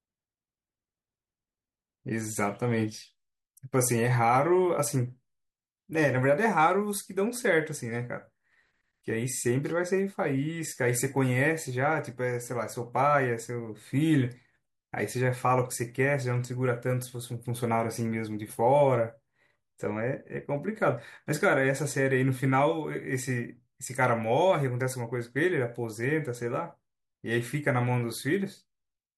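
Listening to this speech recording, nothing technical stood out as wrong at any point.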